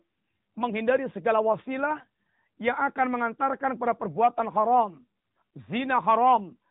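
AMR narrowband mobile codec damage runs through the whole speech clip, from start to finish. The audio has passed through the 2G/3G mobile speech coder, which rebuilds the voice from a vocal-tract model excited by a few pulses per short subframe instead of keeping the waveform itself. Nothing above 3.8 kHz survives, so the voice sounds boxed-in and telephone-like, and the codec damage is plainly audible at around 10 kbps.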